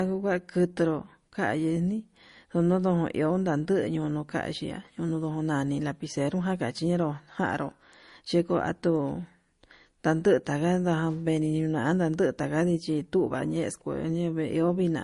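Speech here, and the whole 15 seconds carries layered codec artefacts: swirly, smeared highs on top of a second, different kind of grit, with nothing above about 10.8 kHz. That mix likely comes from transcoding between lossy codecs, pointing to a low-rate MP3 re-encoded to Opus.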